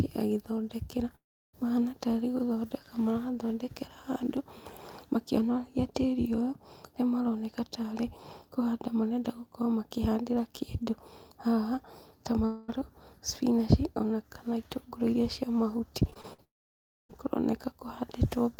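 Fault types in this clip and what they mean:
Long network dropout: The audio cuts out three times, likely from a stalled network stream. Each gap starts with the last sound stretched into a fading buzz. At 1.15 s and 16.44 s, roughly a third and two thirds of a second go missing, mostly as silence. At 12.45 s, just before "spinach ona kana itũngũrũ", a quarter-second is covered entirely by the fade.
Repeated packet loss (robotic sound): Between 16.1 and 16.4 s, right after "itũngũrũ iria cia mahuti", short holes of up to about 50 ms keep recurring. Each is patched by repeating the last sound, so about a third of that stretch sounds choppy.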